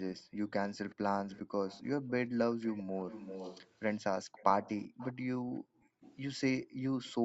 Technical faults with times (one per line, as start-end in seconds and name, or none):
0.16-7.25 echo leak
0.23-0.39 background gated by the echo canceller
4.25-4.36 background gated by the echo canceller
5.42-7.25 background gated by the echo canceller